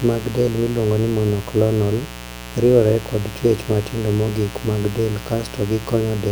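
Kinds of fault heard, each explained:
Mains buzz: present from start to finish, a steady, raspy buzz under the speech, sitting roughly 15 dB below it. It comes from 60 Hz mains power leaking into the signal through something that switches sharply, such as a dimmer, a rectifier or an unshielded path. The spikes arrive twice per cycle, giving a 120 Hz rasp whose harmonics extend up into several kHz.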